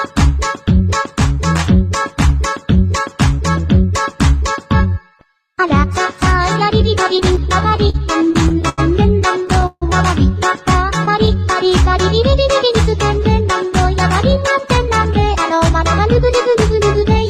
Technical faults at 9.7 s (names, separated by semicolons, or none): call audio freeze